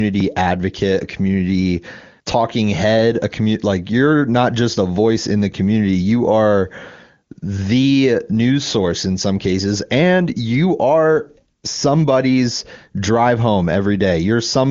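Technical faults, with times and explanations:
No technical faults can be heard in the speech. The sound carries the wideband character of the AMR wideband (HD Voice) codec, reaching up to about 7 kHz, and any coding damage is faint at most, which fits its top rate of 23.85 kbit/s.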